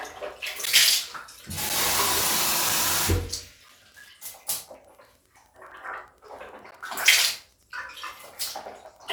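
A faint, steady ticking runs under the sound from start to finish, about ten ticks a second and well below the level of the audio. This is Wi-Fi interference. A nearby Wi-Fi radio sends a beacon every 102.4 ms. The audio circuit picks up those radio bursts and rectifies them into clicks, so the radio's timing becomes an audible pulse that never changes pace.

Short hard-edged dropouts to silence cut through the sound at 0.66 s, 1.69 s, 5.71 s, 6.71 s and 7.71 s. These are gaps between stream segments. Their roughly one-second spacing fits one-second segments. At each joint the time stamps left a small hole that the player filled with silence: about 13 ms, 6.5 ms, 4.6 ms, 11.1 ms and 5.6 ms in turn. The sound pauses there and resumes with nothing missing.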